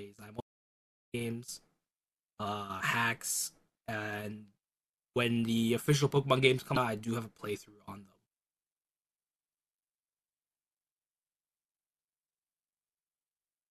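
A speech recording with two faults. Near the start the input signal was most likely lost while the recorder kept writing zeros, an audio dropout to silence: from 0.41 to 1.14 s the sound cuts to silence with no room tone, and about 0.73 s of speech is simply missing. Later, damaged data in a compressed stream left corrupt data that the decoder could not read cleanly; it lost sync and searched for the next valid frame header, which is heard as a brief glitch between 6.73 and 6.77 s.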